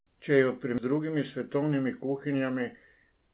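A speech clip with two timing faults. At 0.78 s there is a skip ahead: roughly 0.7 s of speech is simply gone, with no gap or fill, as if that stretch was lost in transit or discarded when the jitter buffer overflowed while later audio was already queued. On a waveform the envelope jumps abruptly from one shape to an unrelated one. On a spectrogram the harmonic traces break off and restart with no silent column between them.

From 0.92 s to 3.29 s a jitter buffer speed-up runs the speech at about 108% of normal rate while the pitch stays the same. The receiver is shedding excess buffered delay by cutting out short pitch-period-sized slices again and again, roughly a fifth of a second in total, so the delivery sounds slightly hurried. Spectrogram harmonics keep their spacing but syllables are compressed in time, and a waveform shows slightly shortened periodic stretches. Throughout, the band stops at 4 kHz, which fits the 64 kbps G.711 A-law call path.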